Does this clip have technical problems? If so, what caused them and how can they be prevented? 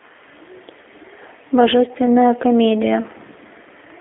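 Yes. Throughout, the speech sounds thin and boxed-in, with a rough, slightly synthetic edge: there is nothing above about 3.6 kHz and little below 300 Hz. This is plainly audible G.729 codec damage, with the character of a G.729A low-bitrate telephony path, which fits roughly 8 kbit/s. Rather than sending the waveform, it models each short frame as a vocal-tract filter, a pitch predictor and a handful of excitation pulses, so fine detail is lost and the narrowband line removes the top end. To prevent it, carry the call over a wideband codec such as G.722 or Opus at a higher bitrate, end to end without transcoding through G.729.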